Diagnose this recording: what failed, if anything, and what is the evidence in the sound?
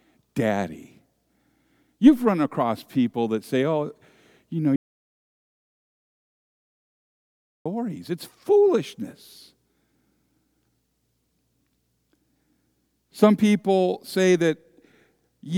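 The speech hits an audio dropout to silence from 4.76 to 7.66 s. The gap is silent, with no room tone. The input was likely lost upstream.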